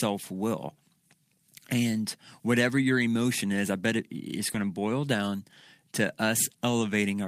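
At 4.49 to 4.63 s, between "I bet it it's" and "to boil down", there is a lost packet rebuilt from error correction. About 80 ms of audio, consistent with four lost packets, was replaced by the low-bitrate copy carried in the following packets, so there is no gap, but the rebuilt stretch sounds rougher and noisier. At 6.07 s a single 20 ms frame is rebuilt the same way.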